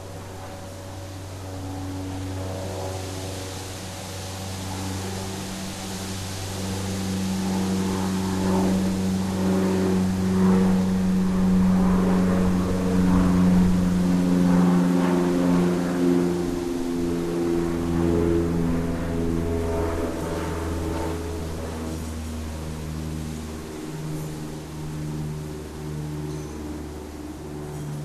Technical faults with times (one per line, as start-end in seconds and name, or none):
none